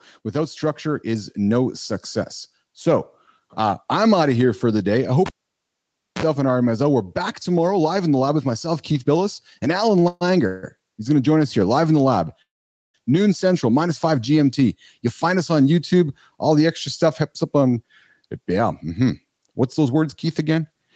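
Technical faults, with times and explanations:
0.32–3.9 s, automatic gain rising: The level climbs steadily by about 6 dB over more than three seconds. The gain control judged the input too quiet and raised its gain in small steps rather than all at once. Because the whole signal is amplified before any processing separates it, the speech and the background noise floor swell together. The result is a slow fade-up, not a jump, and the room noise becomes more prominent along with the talker.
5.26–6.23 s, cable pulled and plugged in: A pop opens a stretch of near silence lasting about 0.92 s as the live connector leaves its socket. During the gap, a 42 ms burst of 60 Hz mains buzz appears. That is the moment only the tip is making contact, leaving the shield open so hum is picked up. A second pop follows as the plug seats fully and the sound comes back.
9.99–10.04 s, short stall from a late packet: A sound is held about 23 ms too long. 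A packet arrived late, so the jitter buffer briefly had nothing to play. The receiver stretched the last audio to fill the hole, then carried on from the same point once the packet landed. Nothing is lost, but timing slips by that 23 ms.
10.08–10.23 s, 10.47–10.78 s and 12.42–12.96 s, call audio freeze: The audio hangs three times. The first two are filled with 131 ms and 160 ms of fading sound carried on from the last sound, and the first of these ends in about 10 ms of silence. The third is filled for 520 ms and falls silent for about 480 ms of that. Packets were likely held up in transit and the jitter buffer ran empty. Playback resumes where it stopped, so gaps are inserted rather than speech removed.
15.94–16.65 s and 17.06–20.65 s, jitter buffer speed-up: The speech runs about 5% fast in the first stretch and about 8% fast in the second, with pitch unchanged, giving a hurried delivery. 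Delayed packets arriving together left the buffer holding more audio than its target. The receiver trimmed many short pitch-period slices in succession to work the delay back down. Around 40 ms was removed in the first stretch and roughly 0.3 s in the second.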